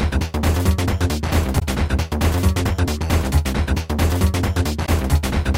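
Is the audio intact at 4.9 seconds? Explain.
No, not quite. There's damaged data in the compressed stream running from about 4.85 to 4.89 s, ending right at the moment you're asking about. Part of the encoded data there got corrupted, so the decoder either misreads those frames or throws them out, loses its place, and hunts for the next valid frame header before it can carry on. Across those roughly 40 ms the sound gets interrupted by a brief chirp, squawk, click or short gap.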